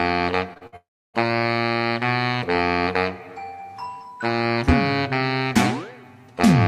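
At 0.53 s and again from 0.58 to 0.63 s the sound briefly smears and wobbles. Each is a short concealed packet loss: about 20 and 40 ms never arrived in time, and the decoder patched the holes by extending the preceding sound before blending back.

From 0.67 to 0.74 s the sound turns into a short held buzz or hiss that fades, then resumes further along with about 60 ms gone. This burst of packet loss is several consecutive missing packets that the receiver filled by continuing and attenuating the last sound.

From 0.76 to 1.16 s a fading continuation gives way to roughly 0.3 s of silence before the audio returns, with around 380 ms lost. This points to a long network dropout, likely a stretch where no packets arrived and concealment ran out.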